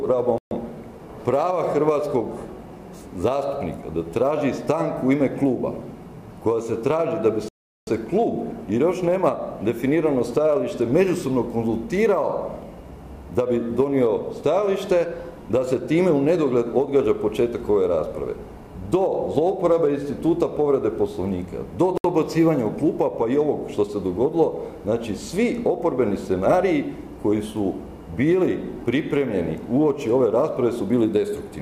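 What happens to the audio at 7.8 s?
At 7.8 s the audio is inside a dropout that runs from 7.49 s to 7.87 s: the sound cuts to silence for 386 ms and then resumes. This is a Bluetooth stall, likely caused by radio interference delaying packets on the wireless link. With nothing arriving, the receiver's buffer emptied and playback halted until the retransmitted packets came in. Sound then continues from the point where it stopped or from slightly further on.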